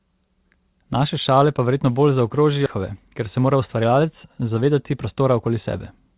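Speech, carried over a narrowband call path with nothing above 4 kHz, the kind of band you'd get from G.711 mu-law. Right after "šale pa verjetno bolj", between 2.66 and 2.68 s, there's a skip ahead: roughly 0.7 s of audio got dropped and playback jumps straight on with no gap. Then from 3.38 to 3.92 s a jitter buffer speed-up trims around 50 ms of pitch periods, so the speech runs about 108% fast at unchanged pitch.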